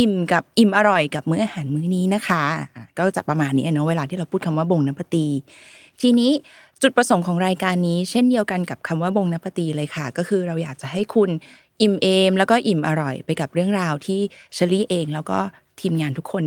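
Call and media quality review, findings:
Lost packet rebuilt from error correction, at 0.93–0.95 s, 9.07–9.09 s and 10.97–10.99 s. Brief rough, noisy patches, no gaps. Each is about 20 ms, which fits one lost packet. The next packet carried a low-bitrate copy, played back by the Opus decoder.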